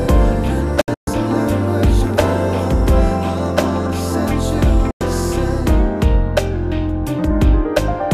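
At 0.81 s a digital broadcast dropout cuts the sound in a quick 3 ms fade. About 192 ms goes missing in holes spread over 0.26 s, the longest 128 ms. At 4.91 s a second 96 ms gap follows. Each fits lost 32 ms frames.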